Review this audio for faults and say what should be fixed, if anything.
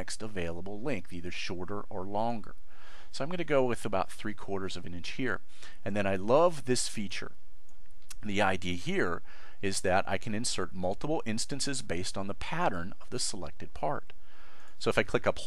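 No faults turned up in this audio, so there is nothing that needs to be fixed.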